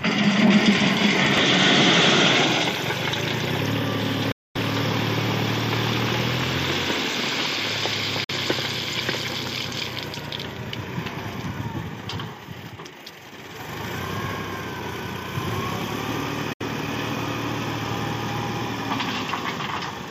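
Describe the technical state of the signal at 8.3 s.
A gap of about 46 ms, 8.24 to 8.31 s, cuts to silence, then resumes as if it had played on, likely a Bluetooth dropout of roughly two lost packets.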